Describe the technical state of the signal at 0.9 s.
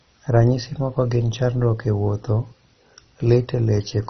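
At 0.9 s you're hearing the same heavy MP2 compression damage that runs through the whole clip. Nothing gets through above about 6.1 kHz, so the speech sounds dull, with a gurgling, grainy edge on top. That fits MPEG Layer II starved of bits, likely at a very low rate around 32 kbps: the upper sub-bands get switched off entirely and the ones left are quantised so coarsely they churn.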